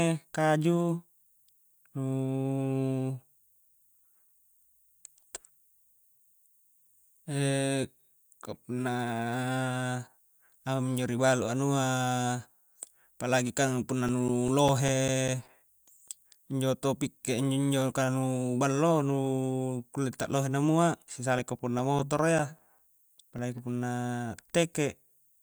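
CD scratch ticks run from 13.49 to 16.08 s and again from 21.19 to 23.58 s. A disc blemish defeats error correction once per revolution, leaving about five brief muted or interpolated gaps a second. They appear as thin evenly spaced vertical lines on a spectrogram and tiny notches in the waveform.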